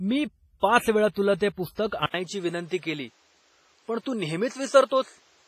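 Throughout the clip the speech has a ringing, washy quality, with a hiss that swells and falls along with the voice, and nothing survives above 15.4 kHz. The damage is heavy. This is the signature of WMA compression, likely from an early WMA encoder at a low bitrate near 24 kbps. Its long transform blocks smear quantisation noise over tens of milliseconds, and weak spectral lines that cannot be afforded are simply dropped.

Pre-echo appears three times. A brief hiss runs ahead of a sharp onset at 0.60 to 0.63 s (28 ms), just before "पाच वेळा तुला ते". It happens again at 1.75 to 1.78 s (27 ms) and at 1.87 to 1.92 s (46 ms), both after that phrase. Each attack sounds softened. The codec spreads its noise evenly across a whole block, so the noise meant for the loud attack leaks into the quiet moment preceding it.

At 2.06 s the sound drops out for 80 ms and then returns duller and narrower, with nothing above 8.8 kHz to the end of the clip. 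A new background noise sits roughly 40 dB below the voice, while the overall level stays about the same. This points to an input switched to a poorer device, likely a change of microphone or a headset's call profile partway through the recording, with the narrower band and the new noise floor coming from that device.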